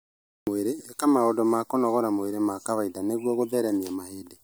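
From 0 to 0.47 s there is digital silence, then a cut-off start: capture began late, so the speech enters abruptly mid-sound without a natural attack.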